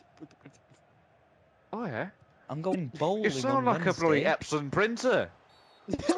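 Damaged data in a compressed stream appears twice, from 2.71 to 2.75 s and again from 6.08 to 6.12 s. In both spots a short run of the coded bytes is wrong, so the decoder cannot read those frames properly, loses its place and has to hunt for the next valid frame header before decoding resumes. Each gap of roughly 44 ms comes through as a brief chirp or blip that cuts across the sound.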